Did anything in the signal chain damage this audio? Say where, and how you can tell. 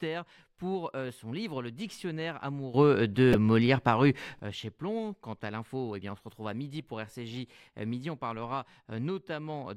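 Yes. At 2.74 s the level of the speech and the background noise jumps up together by about 12 dB and stays there until 4.39 s, just before "euh chez". A sudden gain jump, likely from a digital gain setting in the driver or processing stage applied without a ramp, shows on the waveform as a vertical step in the envelope and noise floor at both edges.

Between 3.31 and 3.35 s there is a short glitch: damaged data in a compressed stream. At the codec or storage stage, corrupted frames made the decoder lose sync and hunt for the next header. A spectrogram shows a brief break in the harmonic structure.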